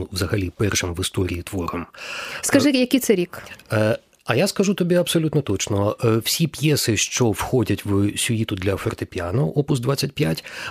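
No technical faults can be heard at any point in the clip.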